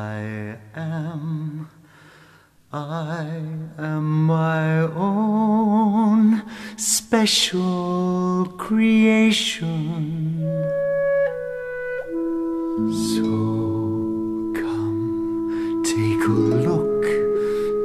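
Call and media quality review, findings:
Compressed frames skipped at 17.35 s: roughly one frame dropped at decode, either missing from the stream or rejected as corrupt. Frame length of 23.2 ms. Audio jumps ahead about 20 ms.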